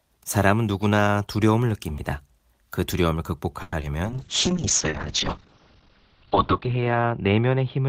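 Call audio freeze, 3.62 to 3.73 s: the last sound is stretched as a fading buzz or hiss for 100 ms, likely from held-up packets draining the jitter buffer, so the audio then resumes 100 ms late with nothing lost.

Short concealed packet loss, 3.80 to 3.82 s and 3.82 to 3.84 s: audio missed the decoder, and the gaps were patched by extending the preceding sound before blending back, giving a brief smear.

Call bitrate drop, from 4.05 s to the end: the encoder fell from 32 to 8 kbps, its bandwidth from 20 to 6 kHz, sounding coarser and duller, lowest for about 2.2 s.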